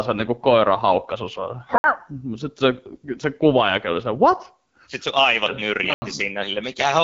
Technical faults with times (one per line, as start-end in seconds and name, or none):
0.00-7.03 gain pumping
0.00-7.03 AMR wideband (HD Voice) codec
1.78-1.84 block of digital silence
5.94-6.02 block of digital silence